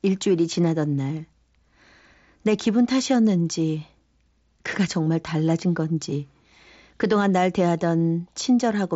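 The speech shows no technical faults, with its bandwidth ending near 7.7 kHz as expected of a wideband Bluetooth mSBC headset link and only the light graininess that codec leaves on louder moments.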